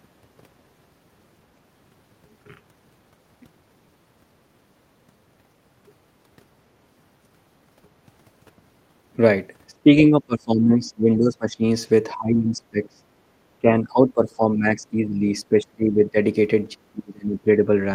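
Speech suppressed in double talk runs through the second half of the clip, at 9.72 to 9.91 s, 10.09 to 11.63 s, 12.14 to 13.04 s, 13.6 to 15.25 s, 15.41 to 16.17 s and 16.74 to 17.67 s. The speech keeps sinking in level, by roughly 15 to 30 dB at its deepest, the later dips being the heaviest. This is likely an echo canceller that, with both ends talking, couldn't tell this talker from returning echo and ducked everything together.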